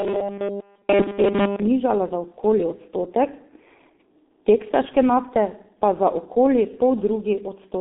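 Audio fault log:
Throughout, G.723.1 codec: the speech is boxed into a narrow telephone band of roughly 200 Hz to 3.7 kHz, with nothing at all above 3.8 kHz, so it sounds muffled and lacks air. The heavy hoarse, smeared quality and blurred consonants point to a very low-rate speech coder, which fits about 6 kbit/s. Its model of the voice is refreshed only every 30 ms frame, too slowly to follow quick articulation.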